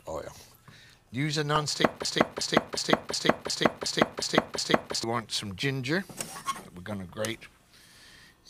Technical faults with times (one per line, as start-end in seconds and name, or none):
1.56 damaged data in a compressed stream
2.05-5.04 broken-record loop